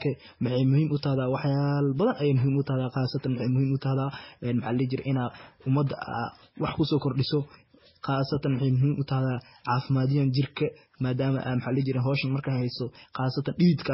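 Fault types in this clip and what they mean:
Transcoding between lossy codecs: the speech carries two layers of coding damage at once, likely a low-bitrate MP3 pass followed by Vorbis. On a spectrogram there is a flat ceiling with nothing above 5.6 kHz, plus blocky, smeared patches and swirling gaps throughout.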